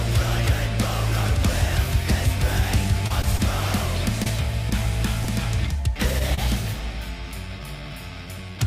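About seven packets were lost between 3.07 and 6.39 s, each patched by continuing the last sound, leaving scattered short gaps heard as brief ticks and smears.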